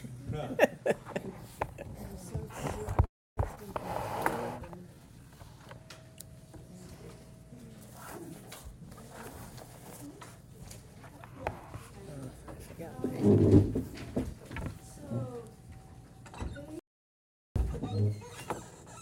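At 3.05 s a call audio freeze holds playback for about 0.32 s, likely from packets stalling: the tail fades into silence, then resumes where it stopped, so nothing is lost. At 3.55 s a skip ahead does the opposite: about 150 ms vanishes and the two sides join almost seamlessly, a jump rather than a pause. From 4.59 to 5.37 s a jitter buffer slow-down repeats pitch periods to add 136 ms, running at 84% speed with unchanged pitch. The drawn-out sound sets it apart from a freeze. Two jitter buffer speed-ups follow, at 9.10 to 9.28 s (126% speed, roughly 50 ms removed) and 10.08 to 12.76 s (107%, roughly 200 ms), hurrying the sound without raising pitch. At 16.79 s an audio dropout to silence cuts everything for about 0.76 s, likely a lost input. Unlike the freeze, it has no fading tail, its silence is total with no room tone, and the missing audio never returns.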